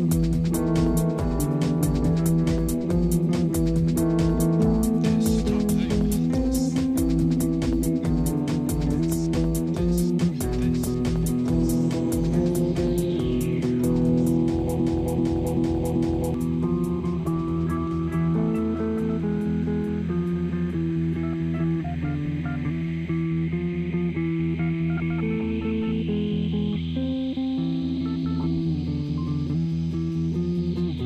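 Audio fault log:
14.80–16.34 s broken-record loop: a 0.39 s fragment repeats four times back to back, likely a stalled stream resending its last buffer; the audio due there is lost.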